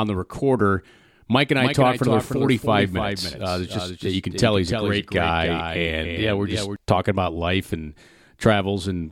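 A speech clip with a doubled audio track from 1.58 to 6.76 s, just before "talking about life and": a second full-band copy trails by roughly 0.3 s at around 5 dB lower, likely from a slower capture path or misaligned edit. On a spectrogram, every syllable's pattern repeats offset to the right, and the waveform shows the copy starting and stopping abruptly, without decay.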